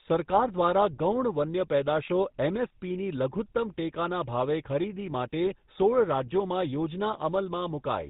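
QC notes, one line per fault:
Throughout: GSM full-rate codec. The speech has a plainly audible buzzy, gravelly roughness and nothing above 4 kHz, which fits 13 kbps GSM full-rate coding. A vocal-tract model excited by sparse, regularly spaced pulses replaces the natural excitation, producing the grainy texture.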